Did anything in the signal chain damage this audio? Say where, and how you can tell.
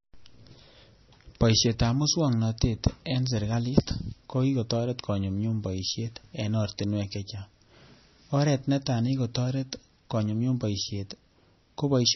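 Yes, at the codec stage, and the damage runs through the whole speech clip. Nothing is present above about 5.9 kHz, a hard treble ceiling rather than a gentle roll-off, and the audio has a watery, swirling texture with metallic chirps on s sounds and smeared consonant attacks. This is likely heavy MP3 compression at a low bitrate, around 24 kbps: short of bits, the encoder discards the top band and lets weak frequency lines flicker between frames.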